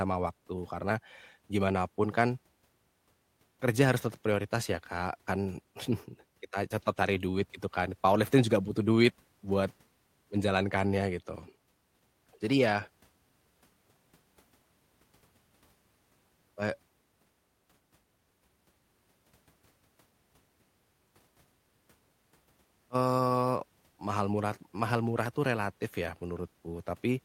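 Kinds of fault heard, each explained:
No technical faults heard.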